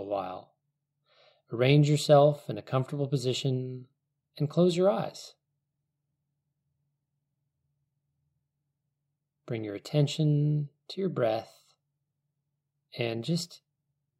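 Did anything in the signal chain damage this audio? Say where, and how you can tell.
No, no signal-chain damage audible.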